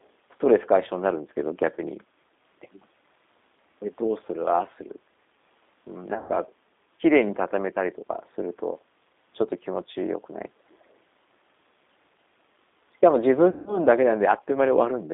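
Speech, carried over a G.729 codec for its whole length. The line passes only about 250 Hz to 3.7 kHz, so it sounds thin and boxy. Coding damage is plainly audible: the sound is rough and slightly synthetic. That fits an 8 kbit/s coder that rebuilds speech from a vocal tract filter, a pitch estimate and a few pulses per frame, rather than sending the waveform itself. Two stretches show VoIP packet loss concealed by the speech codec. At 6.14 to 6.33 s, about 120 ms goes missing in patches spread over 160 ms, with the longest gap near 100 ms. At 13.50 to 13.80 s, about 160 ms is lost, eight packets in all. In both places the decoder stretches the last sound into a buzzy tone or coloured noise that fades. The speech stays weak and smeared briefly after the gaps, while the decoder's state catches up.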